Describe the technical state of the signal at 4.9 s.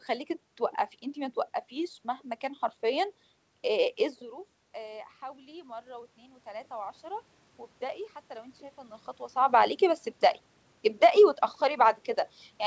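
At 4.9 s the automatic gain rising is under way. The talker moved away from the microphone around 4 s and the input dropped by about 16 dB, so from 4.75 to 7.33 s the gain control slowly adds about 6 dB. Voice and room noise swell up together.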